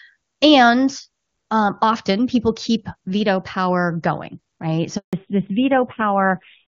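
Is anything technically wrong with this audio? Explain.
Yes, there are two faults. At 4.97 to 5.13 s, just after "veto power going right", there is a handover gap. The call was passed from one network to another and no speech frames arrived during the switch, so the sound fades out quickly and stays silent for 160 ms. Whatever was said in that gap is lost.

From 5.13 s to the end, there is a fallback to narrowband. After the handover the call left HD Voice and settled on an older narrowband codec, likely AMR-NB at a low rate. The crisp wideband sound of the first part gives way to nothing above 4 kHz, so the speech turns muffled, duller and rougher.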